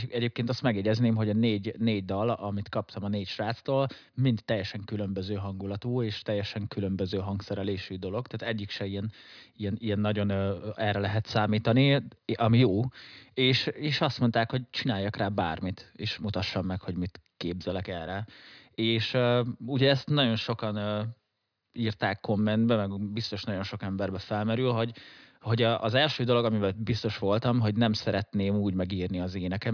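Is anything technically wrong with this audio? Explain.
No, nothing technically wrong stands out here; the speech comes across without any dropouts, glitches or other problems to point to.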